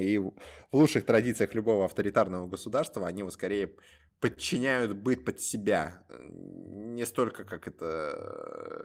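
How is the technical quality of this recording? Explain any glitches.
The speech has one glitch. A short stall from a late packet occurs at 4.34 to 4.39 s. A packet arrived late and the buffer ran dry. The receiver stretched the last sound by about 30 ms and then resumed with nothing lost. You hear a briefly held sound with a slight buzz or dip, and everything after it runs 30 ms later.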